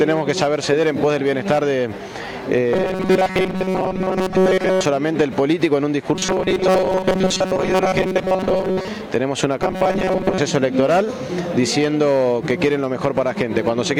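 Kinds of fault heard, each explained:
Robotic sound from repeated short buffers: audio likely arrived too seldom, so a fragment of about 5.3 ms was replayed again and again while most real audio was skipped, stamping a rigid, metallic 188 Hz buzz over the sound in three stretches.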